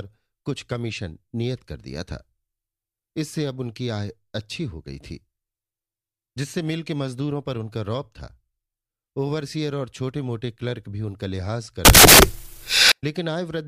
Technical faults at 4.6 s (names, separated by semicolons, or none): none